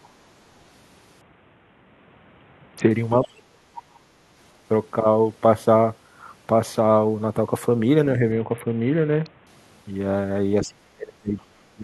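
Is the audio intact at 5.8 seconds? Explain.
Yes, the speech plays through 5.8 seconds intact, with no audible fault at that point.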